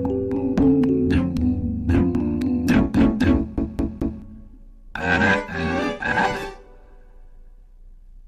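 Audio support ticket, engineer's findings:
CD stuck on one turn, 3.57 to 4.22 s: the same 0.22 s segment repeats three times with short mutes between; a disc scratch skips the laser back one track. Waveform shows identical repeating blocks separated by gaps.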